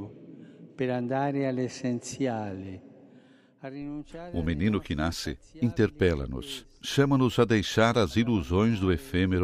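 No technical faults can be heard anywhere in the recording.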